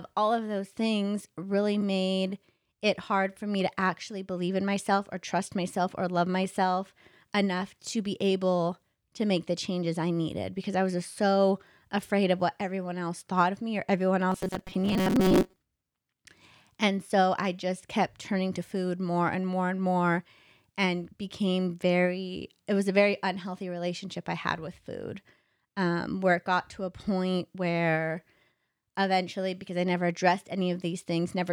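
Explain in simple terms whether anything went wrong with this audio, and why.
After "of me or everyone", from 14.30 to 15.56 s, the speech turns into a flat metallic buzz at 188 Hz. This is robotic sound from repeated short buffers, likely from audio arriving late, so 5 ms snippets were replayed over roughly half the sound. Unlike a dropout, there is no silence, only a fixed drone.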